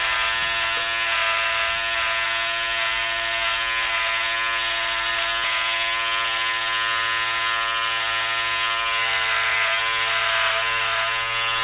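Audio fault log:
5.44 to 5.46 s, skip ahead. Playback jumps forward at this point with no gap or fill. About a second of the sound is missing, and the audio before and after is butted straight together. Later audio was already queued when this stretch was lost, in transit or by an overflowing jitter buffer. The buffer delay shrank by roughly that second. The content cut under the call path's 4 kHz ceiling, which fits a G.711 mu-law codec.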